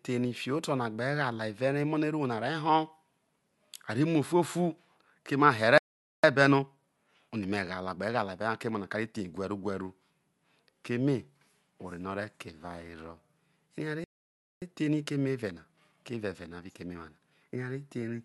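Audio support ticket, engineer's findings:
Playback stall, 5.78–6.24 s and 14.04–14.62 s: player likely starved of data or its thread blocked. Output drops to silence mid-flow for about 0.46 s, then about 0.58 s, before the speech picks up again.

Time-compressed catch-up, 6.24–9.24 s and 14.62–17.62 s: after each stall, the player trims its backlog by cutting out and cross-fading short segments. Speech runs at 1.15x for 3 s, hurried at unchanged pitch.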